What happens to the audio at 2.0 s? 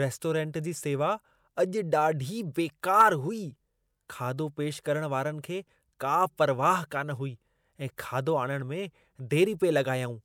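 Nothing goes wrong at 2.0 s: the speech runs through that moment intact, with no dropout, click or other audible fault.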